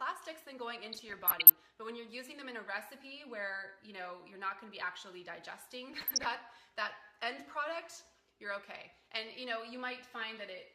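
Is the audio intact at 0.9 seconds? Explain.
No, DAB burbling runs from 0.92 to 1.56 s. Bit errors, at a rate of roughly under one percent, slip past the error correction into the MP2 data, corrupting samples and scale factors so that individual sub-bands blip with noise or jump in level, giving a bubbling, watery sound.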